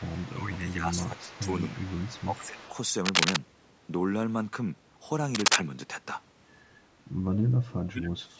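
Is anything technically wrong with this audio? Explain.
Yes, three kinds of fault can be heard in this speech clip.

Echo leak, 0.0 to 0.34 s, 0.56 to 0.72 s and 0.95 to 2.71 s. The likely cause is a far end playing the call over a loudspeaker, where the echo canceller failed to strip out everything its microphone caught and sent the remainder back. A second, delayed copy of a voice trails the talker by 249 ms. It sits roughly 20 dB below the speech in the first stretch and roughly 25 dB below in the later two.

Speech suppressed in double talk, 0.3 to 1.49 s, 1.67 to 1.99 s, 2.25 to 2.66 s, and 7.83 s to the end. Here the loudspeaker side's echo canceller likely could not tell its own talker apart from the returning loudspeaker sound, so it turned everything down. The voice dips by about 15 dB in the first three spans, over around a second, 0.3 s and 0.4 s respectively. The final half second drops by about 30 dB.

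Cable scratch noise, 3.05 to 3.38 s and 5.35 to 5.59 s. A worn cable, connector or control carrying DC was likely moved, and its contact resistance fluctuated quickly. The result is dense, irregular bursts of scratching and rustling laid over the audio, roughly 5 dB louder than the signal itself, lasting about a third and a quarter of a second. The band limit with nothing above 8 kHz comes from the call's microphone processing.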